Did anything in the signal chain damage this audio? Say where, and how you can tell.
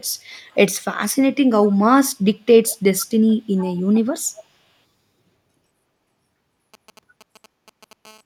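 Yes. In the call processing, the far end's echo canceller likely let part of its loudspeaker pickup through, so an echo leak returns a faint delayed copy of the speech, lagging about 0.44 s. It is heard in scraps at 0.31–0.56, 1.69–1.73, 2.67–2.77, 2.99–3.06, 3.28–3.34, 3.57–4.01 and 4.37–4.43 s. It ranges from barely audible, around 40 dB down, to more noticeable, around 20 dB below the speech, loudest at 2.99 and 3.57 s.

In the analogue wiring, radio energy from a nearby 2G phone was rectified by the audio circuit. From 6.74 to 7.93 s this gives GSM signalling bursts: a galloping dit-dit-dit of short buzzes at 217 Hz, roughly 30 dB under the signal. The grouped rhythm shows the phone was only sending occasional bursts, as when it signals before a call or text arrives.

The same analogue pickup continues as a GSM phone buzz from 8.05 to 8.21 s. Here the bursts are continuous at 217 per second, which fits a phone in an active call. 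They produce a hard, raspy buzz rich in harmonics, about 29 dB below the signal and unrelated to the speech.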